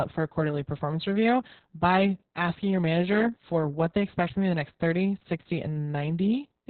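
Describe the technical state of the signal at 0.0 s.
At 0.0 s the speech already carries Opus voice compression, which persists for the whole clip. The coder is running its SILK linear-prediction mode in narrowband with a coarsely quantised excitation, and the heavy damage fits a very low rate of around 6 kbps. The result sounds muffled, hoarse and slightly robotic. A spectrogram shows a hard ceiling with nothing above 4.3 kHz.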